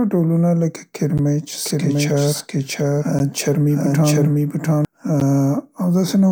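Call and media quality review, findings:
Gap between chunks: audio delivered in 2-second chunks with about 12 ms of silence inserted at each join. Short holes at 1.18 s (just after "ډولونه لکه"), 3.19 s and 5.2 s. No sound lost, but flow breaks at each seam.

Doubled audio track: likely a second, slower capture path or an edit holding two out-of-step copies. From 1.66 s to 4.85 s, a full-band copy trails roughly 0.7 s behind at about equal level, with no decay or room colour, starting and stopping abruptly.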